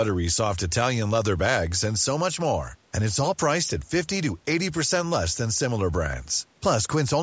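No technical faults can be heard in the speech, which carries the ordinary marks of a call's microphone processing: the lowest bass is trimmed away by its high-pass filter and nothing reaches above 8 kHz.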